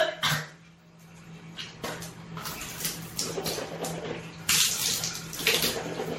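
Generation loss runs throughout this everyday-sound recording: swirly, hollow and smeared, with blurred attacks and nothing above 16.5 kHz, likely from around seven successive MP3 re-encodes, fitting 64 kbit/s.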